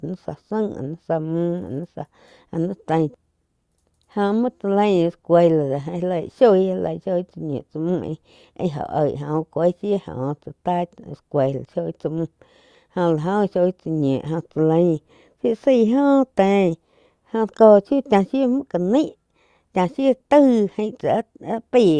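No technical faults are audible.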